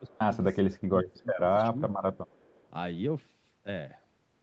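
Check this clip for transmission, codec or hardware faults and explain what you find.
Two problems show up, both typical of a speakerphone call where the echo control struggles, and they overlap right at the start. The audio is band-limited to 8 kHz, which fits the Opus call path it went through.

First, speech suppressed in double talk, at 0.00 to 0.23 s, 0.63 to 1.48 s and 1.71 to 1.91 s. The level sags and pieces of the sound get squeezed out, by up to roughly 20 dB in the long middle stretch, less in the others. That's likely an echo canceller that couldn't separate the near talker from loudspeaker echo while both sides were active, so it turned everything down.

Second, an echo leak, at 0.07 to 0.18 s and again at 2.16 to 2.68 s. There's a faint delayed copy of the sound, trailing by 337 ms and then 358 ms, sitting very low, somewhere around 35 dB under the main signal. The likely cause is the far end's canceller not fully removing what its mic picked up from the loudspeaker and sending that residue back.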